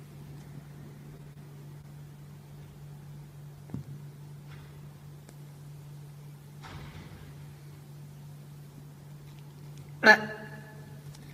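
Around 1.23 to 1.27 s, 1.33 to 1.37 s and 1.81 to 1.85 s there's short concealed packet loss: roughly 20 ms of audio each time never arrived, so the decoder stretched the preceding sound across the hole, giving brief smears.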